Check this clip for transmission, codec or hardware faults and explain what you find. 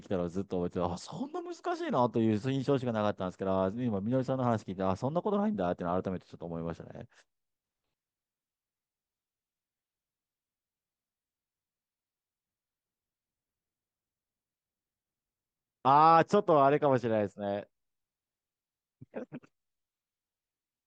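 Checking this clip turns up no faults to explain.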